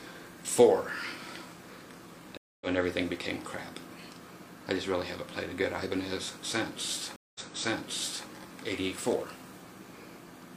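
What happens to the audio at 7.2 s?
A stream reconnect runs from 7.16 s to about 8.28 s. The connection dropped, so the player went quiet, re-established the link and started a new decoder partway through the stream. You hear a gap of silence of 187 ms, and then the audio picks up again about 0.93 s earlier than where it broke off. That happens because the server resent a burst of recent data, so almost a second of material repeats.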